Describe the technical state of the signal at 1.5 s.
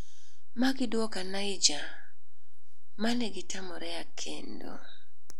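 At 1.5 s there's a DC offset of about -27 dBFS running through the whole clip, so the waveform sits off zero, eating headroom without any audible change.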